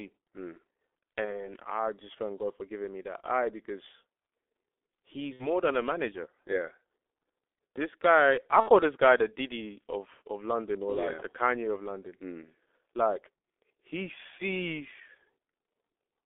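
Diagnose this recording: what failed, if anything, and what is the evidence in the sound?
The speech is muffled and hoarse from start to finish, confined to about 300 Hz to 3.6 kHz, with smeared consonants. This is heavy G.723.1 codec damage, likely at its 6.3 kbit/s rate. The 30 ms frames and slowly updated voice model blur every transition.

Three brief fading smears come from VoIP packet loss concealed by the speech codec: 1.25 to 1.54 s before "I just thank", 5.33 to 5.47 s before "than a manager", and 8.60 to 8.69 s between "guy I" and "this guy the". Each fits one or two lost 30 ms frames, extrapolated with falling gain, with the voice staying weak for a moment after packets return.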